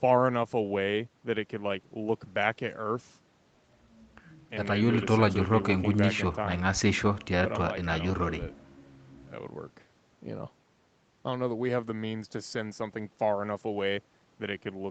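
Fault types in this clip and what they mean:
There are no fault types in this clip.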